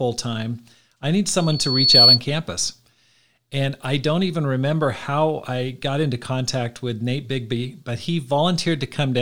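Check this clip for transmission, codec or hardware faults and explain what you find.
One fault: a loudspeaker feedback squeal from 1.40 to 2.20 s, right after "time I need". The microphone re-captures its own loudspeaker, and loop gain exceeds one at 4.4 kHz. A single tone swells over roughly half a second to about 10 dB above the speech.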